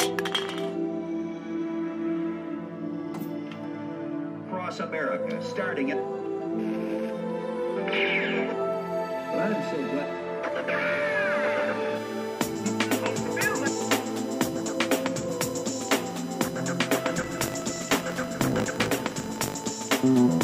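Right near the end, from 17.14 to 19.75 s, there's a filter restarted on every block. The filter throws away its internal state at each block boundary, so every block kicks off from silence and leaves a tiny transient at the seam. Those ticks land 50 times a second, which fits blocks roughly 20 ms long, and they merge into a low 50 Hz buzz riding under the sound, getting louder and quieter along with the signal.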